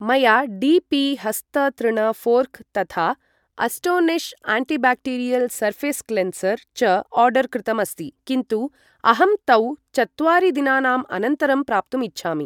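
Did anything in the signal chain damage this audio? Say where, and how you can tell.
No, nothing in the signal chain has left audible damage on this speech recording. At no point does the sound reveal a fault from any stage between capture and playback.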